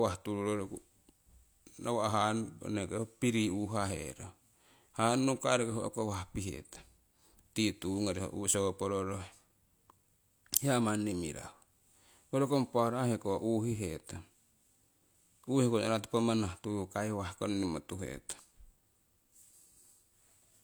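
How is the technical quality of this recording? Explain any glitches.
The technical quality of the recording holds up, with no glitches to explain.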